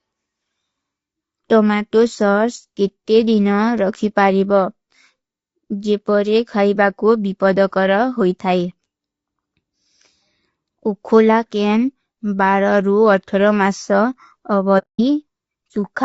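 This speech clip has plainly audible low-delay AAC compression running the whole way through. The voice comes across rough and grainy, with noise filling the gaps between harmonics and a thin, synthetic-sounding top end, most likely from AAC-ELD at a low rate, which fits something around 32 kbps. Then from 14.78 to 15.01 s there's AAC frame loss with muting. The sound fades out into a soft-edged hole lasting about 210 ms and fades back in, which fits roughly seven frames being dropped and zeroed by the decoder.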